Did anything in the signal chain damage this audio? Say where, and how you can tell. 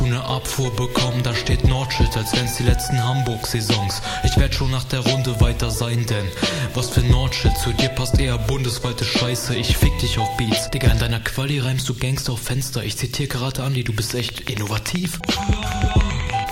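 Yes. From 14.10 to 16.50 s a train of clicks ticks over the sound at a steady 10.5 per second, about thirty alike pops, some roughly 15 dB above the signal. The likely source is interference in the analogue wiring or a struggling interface injecting repeated pulses.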